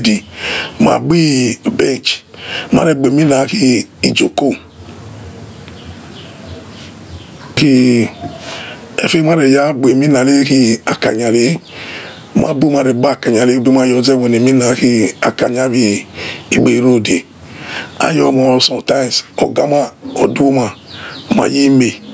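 Gain pumping runs the whole way through, with the level swinging by around 20 dB. Likely the mic gain is set far too high with a fast limiter clamping down, so the speech sounds squashed.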